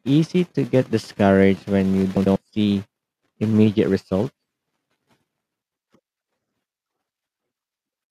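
At 2.17 s, after "get discouraged when you" and before "see immediate results", a stretch of about 0.19 s plays with its two halves swapped: frames out of order. Two adjacent 96 ms blocks, which fits four frames each, were decoded in reversed sequence, giving a garbled flutter. The same happens at 5.62 s. Unlike a dropout or a repeat, nothing is missing or doubled, and the timing stays intact.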